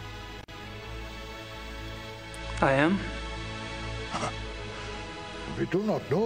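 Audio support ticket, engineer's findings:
Intermittent contact, 0.41 to 0.52 s: signal drops out for 44 ms with crackle at both edges and faint hiss in the gap. Probable loose plug or cable momentarily opening. Waveform shows a near-flat gap bracketed by sharp spikes. Spectrogram shows a vertical broadband stripe at each edge with a dark band between them.

Digital radio blending to analogue, 2.07 to 5.89 s: hybrid receiver lost the digital stream and cross-faded to the FM broadcast over 431 ms, then back. Level shifts by about 3 dB, and hiss rises to roughly 30 dB below the signal. Spectrogram shows a grey noise floor filling in. Waveform envelope steps at each blend.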